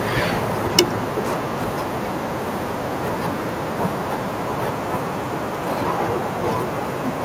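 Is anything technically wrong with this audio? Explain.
Yes, microphone overload at 0.78–0.80 s: input gain, likely set too high, pushed peaks about 11 dB past the converter's limit, flattening them into a harsh crackle.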